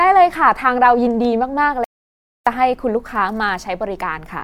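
At 1.84 s the speech cuts off abruptly and the signal drops to silence until 2.47 s, an audio dropout to silence lasting about 0.62 s. No room tone or noise floor survives in the gap, which points to the input being lost while the recorder kept writing silence, likely a momentary disconnect or mute upstream. Speech resumes mid-flow at the far edge, and whatever was said during that stretch is missing.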